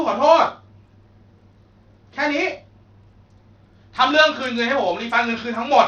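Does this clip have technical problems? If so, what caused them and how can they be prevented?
Yes. The clip was likely passed through Bluetooth SBC compression at a starved setting. The damage sounds consistent with a bitrate of around 80 kbps, a bit pool too small to feed every sub-band. The upper bands get few or no bits and the rest are coarsely quantised. Throughout the speech, the treble flickers in and out, and a gritty, aliased grain clings to the voice. To prevent it, record or monitor over a wired link, or raise the Bluetooth codec quality.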